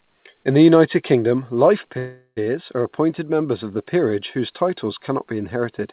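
At 1.98 s the speech stalls for about 0.41 s in a call audio freeze: the last sound is stretched into a fading buzz, then roughly 70 ms of silence, until 2.39 s. Delayed packets likely emptied the jitter buffer. Speech resumes intact but 0.39 s later, still band-limited to 4 kHz, which fits a G.711 call path.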